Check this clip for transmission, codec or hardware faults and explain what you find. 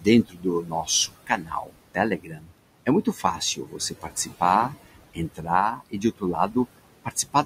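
The clip shows processing faults from a noise suppressor working against room noise that sits about 13 dB below the speech.

Noise suppressor artifacts run throughout. Bands judged as steady noise are pulled down by about 21 dB, so the noise sinks between words and rises under them. On a spectrogram this shows as speckled, flickering gaps between words.

Speech cut by the noise suppressor occurs at 0.0–2.51 s, 2.86–4.74 s, 5.14–6.56 s and 7.04–7.45 s. Quiet speech parts were mistaken for noise and dropped by up to about 21 dB, making them faint and swallowed. The waveform shows notched dips in the speech.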